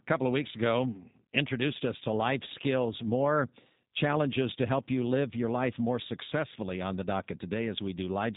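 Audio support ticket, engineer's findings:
Speech rough and faintly synthetic throughout, nothing above 4 kHz. G.729 codec damage: speech rebuilt from filter, pitch predictor and sparse pulses per 10 ms frame. Consistent with 8 kbit/s G.729A.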